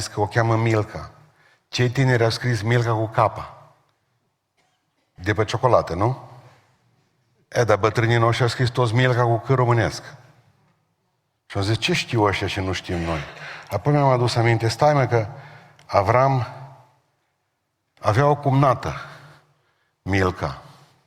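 No technical fault can be heard anywhere in this speech recording; the signal stays steady and intact for its whole duration.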